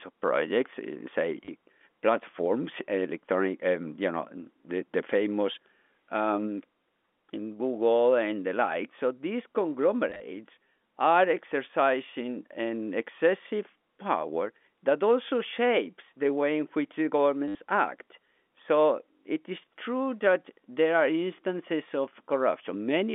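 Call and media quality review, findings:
Short robotic stutters at 1.45–1.48 s (before "platforms electronic um you"), 10.1–10.2 s (scattered), and 17.48–17.55 s (after "way in which the"). Likely packet loss with last packet repeated; 100 Hz buzz fits 10 ms packets.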